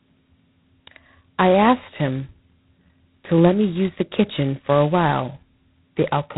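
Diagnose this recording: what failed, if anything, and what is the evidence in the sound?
The codec stage failed here: the speech carries G.726 ADPCM damage from start to finish. Nothing passes above about 3.9 kHz, and a harsh, rasping hiss rides on the speech, swelling with louder passages and sinking in quieter ones. The coder sends only a coarse difference from its adaptive prediction for each sample, so quantisation noise tracks the signal level. The heavy roughness fits the 16 kbit/s mode, at 2 bits per sample.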